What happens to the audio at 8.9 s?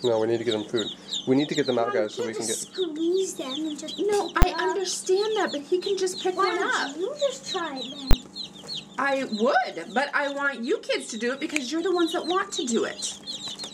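Nothing goes wrong at 8.9 s; the audio passes through that moment intact, with no dropout, click or distortion to be heard.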